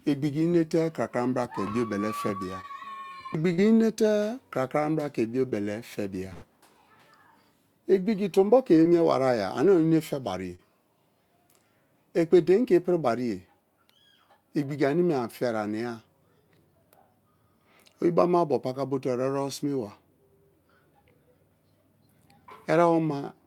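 Short concealed packet loss at 2.61, 3.53 and 5.50 s (just before "fe bia"): 20 to 40 ms of the stream arrived too late, so the receiver extended the preceding sound to cover the gap, leaving a brief smear or wobble as real audio resumes. A burst of packet loss follows at 6.33 to 6.44 s, right after "fe bia". About 80 ms went missing in a row, and the receiver carried the last sound forward while fading it, a held buzz or dying hiss before the audio picks up further on. Short concealed packet loss returns at 8.84 s, after "tombo ke", and at 10.55 to 10.60 s, again as brief smeared patches.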